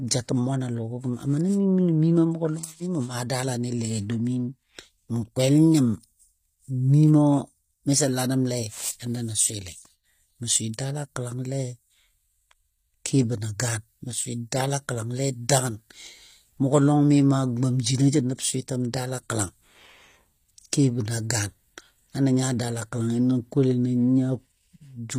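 HE-AAC compression runs through the whole recording, most likely HE-AAC v2 at a low rate; the plainly audible damage fits a bitrate around 24 kbps. The codec spends its bits on the lower spectrum and rebuilds the treble by copying lower bands upward under a coarse envelope. The top end stays bright but is synthetic, and it stops dead at 15.5 kHz. Sibilants come out gritty and metallic, with harmonics not lining up across the crossover.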